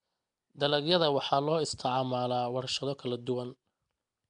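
From start to finish the speech carries a rough, hissy halo and a smeared, underwater quality, with plainly audible damage that is most likely Nellymoser compression from the old Flash microphone codec. Quiet bands starved of bits are filled with noise, so the spectrogram shows grainy, speckled patches between harmonics and a flat ceiling with nothing above 10.6 kHz. The blocky smearing fits a stream of around 44 kbps.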